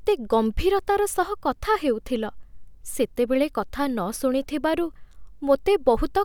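No technical faults occur at any point in the recording.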